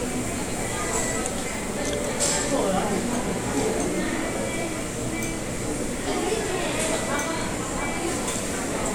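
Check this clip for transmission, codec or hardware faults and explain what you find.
Nothing turned up on a listen to these sounds, so there's no transmission, codec or hardware fault to report.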